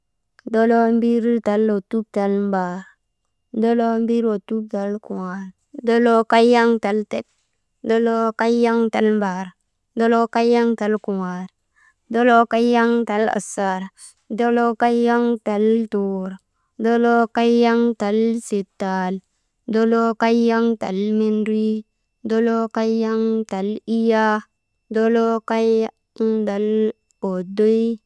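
The speech recording has no audible technical faults at any point.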